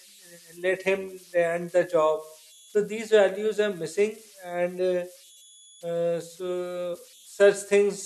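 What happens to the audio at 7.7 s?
A delta-sigma converter running without dither is settling into repeating bit patterns whenever its input gets small, and at 7.7 s those converter idle tones are present, as they are throughout the speech. The patterns produce a whistle of around 3 kHz, sitting about 28 dB below the speech level. It stands out in pauses as a thin tone or chirp, and under the speech it turns into a grainy hiss.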